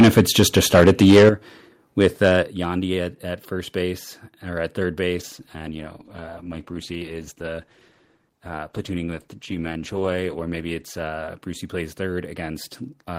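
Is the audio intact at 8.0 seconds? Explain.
No. At 8.0 s the speech sounds rough, watery and muffled, with the top end missing. This is a call bitrate drop, running from 5.18 s to the end: the encoder was cut from 64 to 13 kbps, coding more coarsely and discarding high frequencies.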